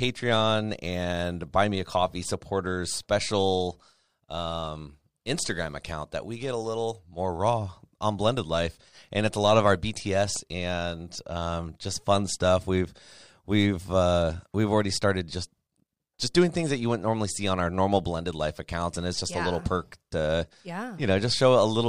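Just after "a lot of our", from about 10.07 to 10.51 s, there's a short run of CD scratch ticks: four sharp clicks, each under a millisecond, spaced roughly seven a second, and they stop before "and um just fun". A scratch or blemish on the disc wiped out more data than error correction could rebuild, once per revolution, so the player patched over the damaged samples and left these tiny regular ticks.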